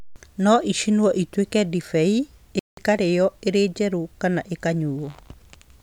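After "ĩcinwo ĩtuĩke ndibei", the speech drops to silence from 2.59 to 2.77 s, a 181 ms gap before "ĩkarĩĩo ĩrĩ njerũ kana", likely a Bluetooth stall where delayed packets emptied the receiver's buffer.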